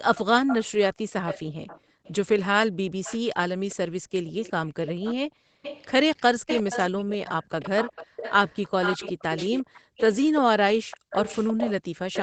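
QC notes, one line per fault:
0.14–0.65 s, 1.26–2.12 s and 3.03 s to the end: echo leak. A delayed copy of the speech trails it by 349 ms, roughly 10 dB quieter. The likely cause is a loudspeaker at one end whose echo canceller let part of the microphone pickup travel back down the line.
1.80–2.04 s, 4.00–4.12 s, 5.28–5.62 s, 9.70–9.97 s and 10.80–11.10 s: background gated by the echo canceller. The room sound dips sharply, up to about 40 dB, for roughly a tenth to a third of a second each time. The canceller clamped the microphone while the loudspeaker played, then released it.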